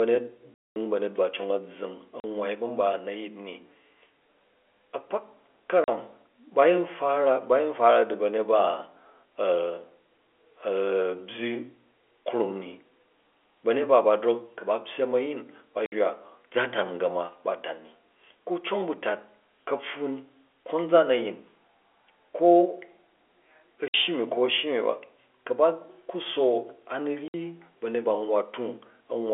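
Packet loss filled with silence cuts hard-edged holes into the speech at 0.54–0.76 s (220 ms, just before "banyet ba"), 2.20–2.24 s, 5.84–5.88 s, 15.86–15.92 s (after "ku̱ ba pyyem a̱yin"), 23.88–23.94 s (before "shyi nu ko a̱") and 27.28–27.34 s. Every gap is a multiple of 20 ms, which suggests 20 ms packets whose loss the receiver replaced with silence. This happens on a G.711 A-law telephone-band path.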